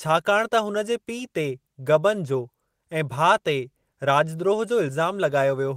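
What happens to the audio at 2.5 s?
Nothing goes wrong at 2.5 s: the speech runs on intact through that moment, with no dropout, click or distortion.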